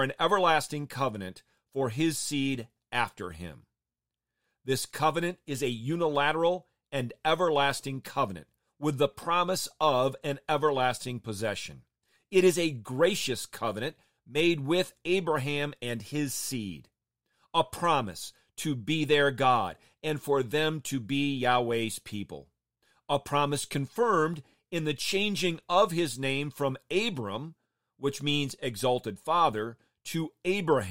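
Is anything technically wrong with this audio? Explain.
No, no technical faults heard.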